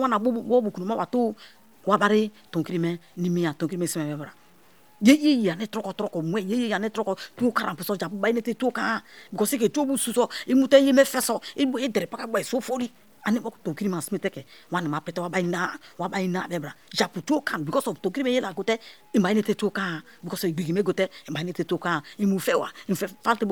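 From start to finish the speech carries a grainy, gritty distortion that rides on the voice and shifts with it, thickening as the level falls, so soft syllables and word tails sound rough, and the quietest moments sputter or break off rather than fading smoothly. This is low bit depth without dither, likely from truncating the samples to a coarse grid, which fits roughly 9 bits. Because no dither was added, the rounding error follows the signal and sits only about 35 dB below it.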